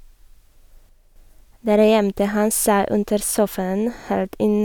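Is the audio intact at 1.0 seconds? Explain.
No. From 0.89 to 1.16 s a sudden gain jump cuts the level by about 6 dB. The likely cause is a digital gain setting, or a one-bit shift, applied from one sample to the next with no ramp, then reversed the same way. The speech and the background noise drop together, so the passage sounds abruptly quieter for roughly a quarter of a second before snapping back to its earlier level.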